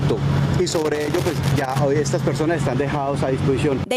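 Gain pumping runs through the whole clip. The level of quieter passages and the background in the gaps swells and ducks by around 5 dB, dropping under each loud sound and recovering afterward. The likely cause is gain set far too high with a fast limiter or compressor pulling it down on every peak. Unlike a fade or a slow level drift, the dips follow each loud event.

From 0.69 to 1.79 s there is loose connector crackle. A worn or dirty contact makes and breaks as it moves, chopping the signal and adding pops from any DC on the line. What sets it apart from steady hiss or clipping is its irregular, scratchy bursts.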